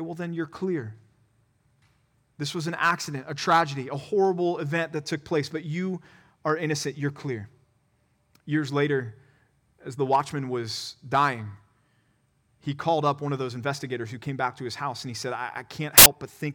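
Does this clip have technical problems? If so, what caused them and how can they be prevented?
Yes, there's one. Right after "and he said I", from about 15.98 to 16.06 s, the speech turns into a short burst of loud, harsh broadband noise: samples built from the wrong bytes. For those 80 ms the reader is stitching each sample together from the wrong bytes, off by one, swapped, or misaligned. The jittery low bits end up as the big part of every value, so you get noise instead of speech. To prevent it, make sure the byte order and frame alignment the decoder assumes match what the file actually contains.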